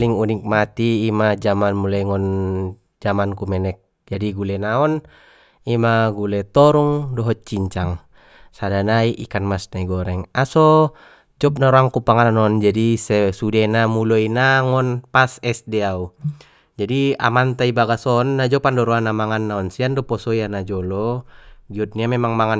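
No technical faults can be heard anywhere in this speech recording.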